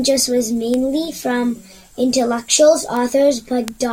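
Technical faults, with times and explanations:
0.74 s, 2.97 s and 3.68 s: bit error spike. Each is a single sharp tick sitting on top of the speech, broadband and unrelated to what's being said. A flipped bit pushes a sample, or a very short run of two or three, up by a power of two before it drops straight back. The first two peak around -7 dBFS. The last, near the end, hits about -1 dBFS, so it's the loudest.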